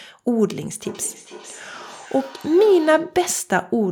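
From 0.85 s to 3.25 s, each stretch of speech comes back as a faint, thin, ringing copy roughly 0.4 s later, peaking at about 20 dB below the direct speech. This is feedback echo between two devices: a second device in the same room on the same call plays the audio back, and this microphone picks it up again. Each device's echo canceller removes only its own playback, so the returning copy passes straight through.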